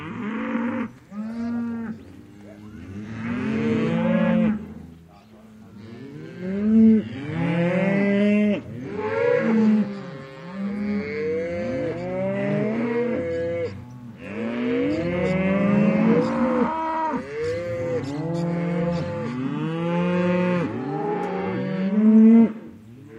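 Everyday sounds; no technical faults detected anywhere in the recording.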